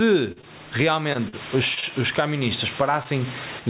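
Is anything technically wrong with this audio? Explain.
Yes, there are three problems in this speech clip.

Gain pumping runs through the whole clip, with the level swinging by roughly 15 dB. Loud and quiet passages sit unnaturally close together, giving a squashed, breathing quality. The likely cause is input gain set far too high, with a fast limiter or compressor clamping down on each loud sound.

Short concealed packet loss appears seven times: at 0.32 to 0.41 s, 0.41 to 0.45 s, 1.13 to 1.17 s, 1.29 to 1.35 s, 1.75 to 1.92 s, 1.80 to 1.84 s and 3.03 to 3.06 s. Each is a brief smear or wobble where a consonant may drop out. Between 20 and 40 ms of audio failed to arrive in time each time, and the receiver papered over the gap by extending the preceding sound before blending back into the real signal.

Low bit depth with dither covers 0.97 to 3.59 s as a steady, even hiss around 20 dB below the speech, with no crunch or distortion. 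The signal has been reduced to about 7 bits, and the dither added before rounding turns the quantisation error into flat white noise. This hiss sits on top of the narrowband G.711 call sound, which has nothing above 4 kHz.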